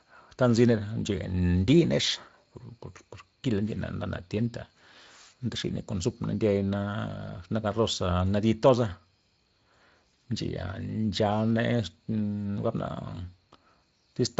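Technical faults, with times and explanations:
Nothing stood out as a technical fault on listening to this speech.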